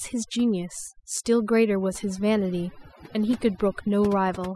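Throughout, overdone noise removal cuts bands near the noise estimate, leaving a lowered background that breaks up into twinkling specks, unlike a gate's whole-signal cutoffs.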